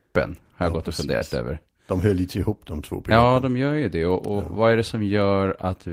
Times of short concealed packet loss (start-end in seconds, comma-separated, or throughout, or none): 1.17-1.23